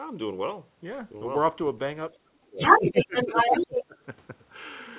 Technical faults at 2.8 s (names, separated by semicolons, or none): speech suppressed in double talk; other side's voice leaking through